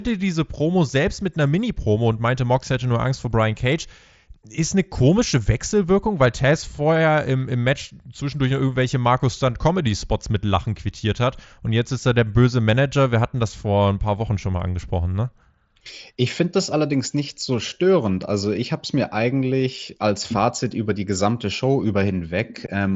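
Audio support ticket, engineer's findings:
No fault found: speech arrives over a Bluetooth mSBC headset link, band-limited with nothing above about 7.7 kHz and only light codec graininess on louder passages, consistent with a normal wideband headset path.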